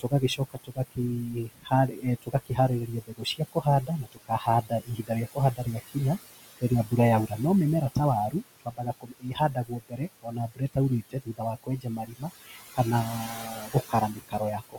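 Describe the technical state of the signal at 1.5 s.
At 1.5 s the speech is being cut by the noise suppressor, within a stretch from 0.0 to 5.97 s. The suppressor misjudges quieter parts of the speech as background and attenuates them along with it, by as much as about 22 dB, so consonants and endings sound swallowed or faint, adding up to roughly three seconds across the span.

Noise suppressor artifacts are also present here, as throughout the clip. The gain applied to noise-classified bands changes frame by frame, pulling the room noise down by about 17 dB between phrases and letting it back up under speech.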